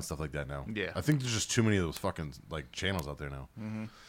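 At 1.12 s, just before "there's just too many", a bit error spike ticks through the speech, peaking at about -16 dBFS. Two more follow at 1.97 s, between "too many of those" and "fucking like", and at 2.99 s after "of those fucking like", each about -10 dBFS. Each is a single flipped bit in one sample, so the value jumps by a power of two and snaps straight back. What sets these apart from a dropout click is that the audio never goes silent around the tick.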